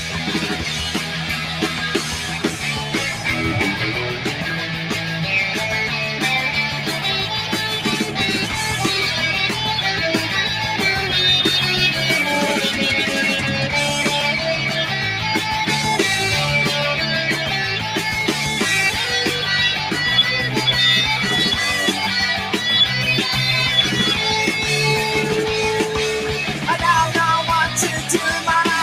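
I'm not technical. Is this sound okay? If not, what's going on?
No, not quite. From 4.17 to 5.23 s, and again briefly from 6.68 to 6.87 s, the sound dips a little: that's sound cut by the noise suppressor. It mistook those moments for background noise and turned them down, so steady parts sink slightly.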